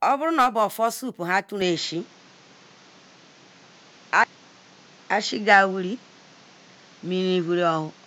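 At 1.61 s the speech suddenly turns duller and a bit boxier, and it stays that way to the end. Nothing reaches above 7.6 kHz from that point, the level shifts by a few dB, and a new, fairly low background noise comes in underneath. There's no gap at the changeover, just an abrupt change in tone. That's most likely an input switched to a poorer device partway through the recording.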